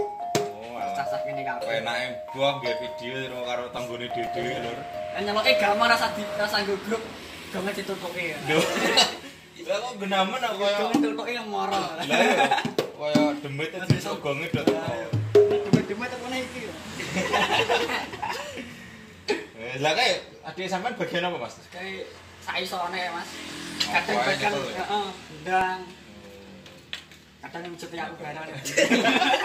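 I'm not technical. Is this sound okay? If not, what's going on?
No. From 3.8 to 4.8 s and again from 24.1 to 25.6 s there are quick, evenly spaced ticks, about seven a second. These are CD scratch ticks: a blemish on the disc spoils a tiny moment of sound once per turn, and the player patches over it.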